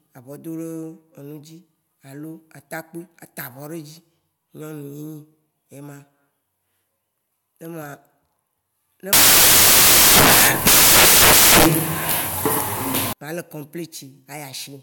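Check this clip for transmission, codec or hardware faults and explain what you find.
One fault is present. From 9.13 to 13.13 s, samples are built from the wrong bytes. Misassembled bytes turn fine low bits into loud, harsh broadband noise over the speech.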